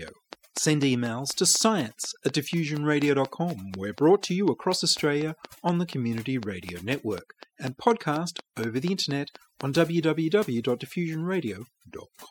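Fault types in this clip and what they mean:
Overdone noise removal, throughout: noise reduction was pushed too hard on a noisy recording, so individual frequency bands that come close to the tool's noise estimate are pulled far down or switched off entirely. The quietest parts of the speech fall below that threshold and vanish along with the noise. The background drops to near silence scattered with twinkling specks.
Train of clicks, from 0.08 s to 9.6 s: a steady series of similar-shaped pulses at about 4.1 per second, regularly spaced, roughly forty in all, peaking at about 10 dB above the speech. They tick and pop over the talking and through the pauses alike, then stop well before the end. The cause is likely electrical interference from nearby equipment or a faulty connection or power supply.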